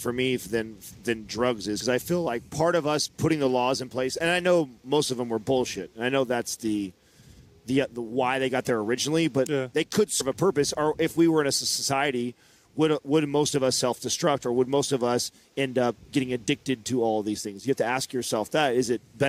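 At 10.20 s the audio briefly lurches forward, with around a tenth of a second of sound simply gone. This is compressed frames skipped: several whole frames of the encoded audio were never played, either missing from the file or rejected by the decoder as damaged. The gap fits roughly five frames of about 23 ms each.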